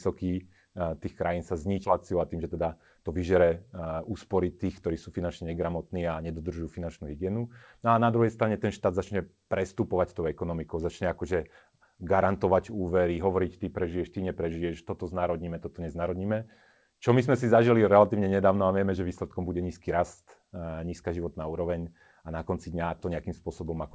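Speech over a call path, with nothing above 8 kHz, which fits a G.722 codec at 64 kbps. A skip ahead occurs at 1.84 to 1.86 s, right after "tých krajín sa". About 0.7 s of speech is dropped, and the two sides are joined with no gap. A jitter buffer speed-up follows from 2.13 to 4.11 s. The buffer held too much audio, so short pitch-period pieces were cut repeatedly. Speech runs at 113% speed at the same pitch, losing about 0.3 s, and sounds hurried.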